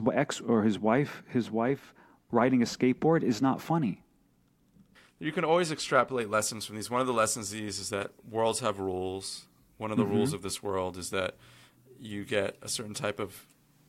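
From about 6.21 s to the end, the speech turns thin, bright and hissy on the sibilants. That's pre-emphasis left on, with the treble boosted and never cut back. The curve looks like CD 50/15 µs emphasis, lifting 10 kHz about 8 dB above 1 kHz.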